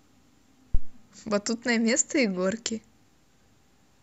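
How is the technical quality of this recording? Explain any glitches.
The recording has one clear glitch, a phantom power thump from 0.75 to 0.95 s. Switching the supply on a live input sends a voltage step through the coupling capacitors, producing a deep low thump peaking about -9 dBFS that dies away within roughly 46 ms. Unlike a plosive or handling bump, it is a single clean electrical step with no airy burst or rubbing texture.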